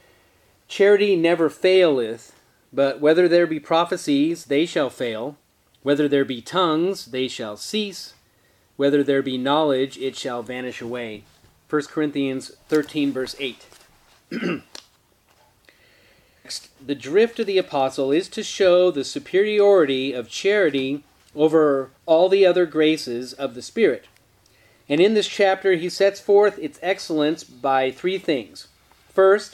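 At 16.44 s the sound jumps abruptly forward with a brief blip, likely a stream segment skipped, where one chunk failed to load and playback resumed at the next. The waveform shows a hard discontinuity, and the spectrogram shows a thin vertical broadband line at the join.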